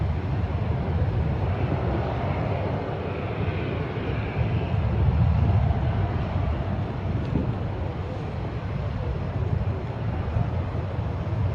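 No technical fault can be heard anywhere in the audio. No dropout, glitch or other disturbance stands out at any moment.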